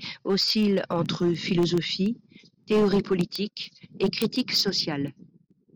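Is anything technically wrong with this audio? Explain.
Yes. Two faults are present in this speech clip.

Hard clipping runs throughout. The signal is driven about 8 dB past what one stage can pass, so the loudest peaks are sliced flat. A small share of samples, roughly a few percent, hit that ceiling. The flattened tops create harmonics high in the spectrum. On louder syllables this is heard as a gritty crackle riding on the peaks.

Word clock ticks run from 0.20 s to 5.65 s. A digital link is being read by a device on its own clock, not locked to the sender. The two clocks differ by something like 150 parts per million. Each time they slip past each other, a single sample is dropped or repeated. That happens about every 0.15 s, around forty times in all. The result is a steady train of sharp ticks of uneven strength.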